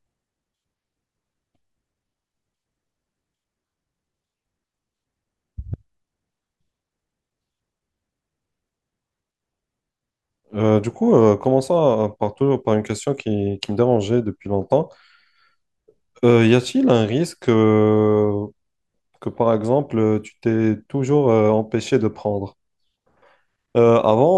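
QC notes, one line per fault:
Nothing to flag anywhere in the speech.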